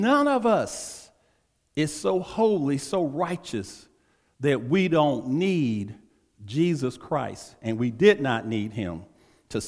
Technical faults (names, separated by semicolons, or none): none